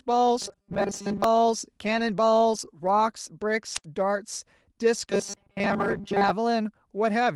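From 0.42 to 1.24 s and again from 5.10 to 6.30 s, the speech turns into a rigid, metallic 200 Hz buzz. This is robotic sound from repeated short buffers, likely caused by the same 5 ms of audio being replayed while most of the real signal is skipped.

At 3.74 to 3.84 s there is a wireless microphone squelch dropout: the signal fades, and the receiver mutes the output for about 76 ms before the speech returns.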